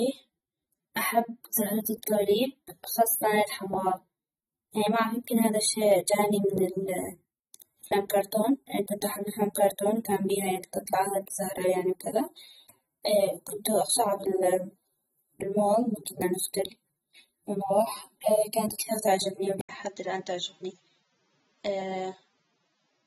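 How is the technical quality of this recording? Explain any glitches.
Technical quality is limited: the speech carries audible codec damage throughout, and near the end the input changes to a poorer device.

AAC compression, throughout: smeared, warbling speech with nothing above 15.9 kHz, likely from low-bitrate AAC-LC, which fits about 24 kbps. A spectrogram shows patchy high bands.

Input switched to a poorer device, from 19.61 s onward: an 80 ms gap, then duller sound cut off above 7.5 kHz with a faint new noise floor, likely a device change. The waveform shows the gap, and the spectrogram shows a lowered ceiling.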